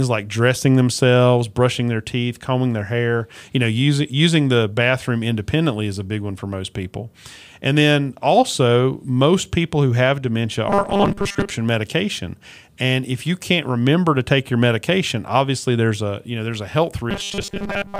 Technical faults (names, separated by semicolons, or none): robotic sound from repeated short buffers